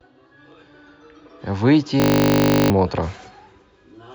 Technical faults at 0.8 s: none

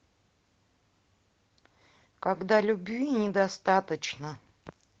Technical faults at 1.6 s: none

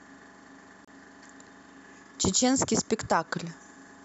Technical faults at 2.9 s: none

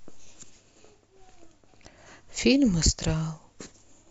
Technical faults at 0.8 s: none

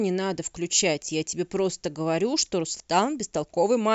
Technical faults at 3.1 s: clock slip clicks

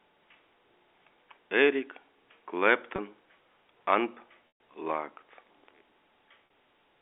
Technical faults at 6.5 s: loudspeaker feedback squeal; packet loss with pitch repetition

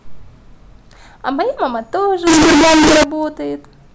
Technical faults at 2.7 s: float read as integer

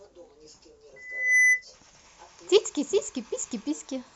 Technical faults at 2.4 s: none

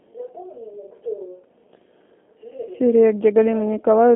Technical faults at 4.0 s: G.729 codec

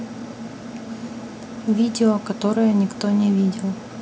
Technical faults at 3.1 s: none

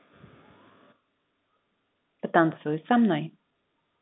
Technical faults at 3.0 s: none

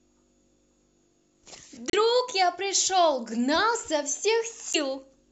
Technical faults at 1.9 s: Bluetooth stall

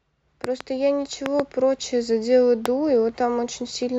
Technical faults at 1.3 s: loud pop

